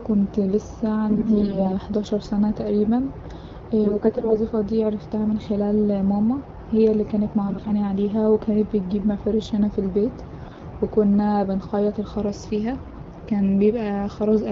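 Speech coded as AMR wideband, with five bursts of AMR bit errors. They hit at 1.08–1.74 s, ending before "حداشر سنة", then at 3.84–4.36 s and 7.48–7.71 s. Another falls at 10.39–10.64 s, after "مفارش هنا في البيت", and the last at 12.81–13.04 s. Weakly protected frame bits arrive flipped. Excitation pulses land wrongly, so pitch and level hold but the sound turns hoarse and gargly.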